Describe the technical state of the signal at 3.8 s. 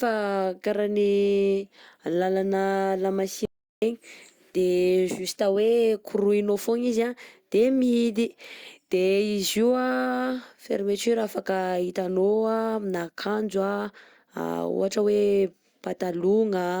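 At 3.8 s you're right at the tail of an audio dropout to silence: the speech cuts out at 3.45 s and returns at 3.82 s. That's about 0.37 s of pure silence, no room tone, most likely from the input briefly losing its connection while recording continued.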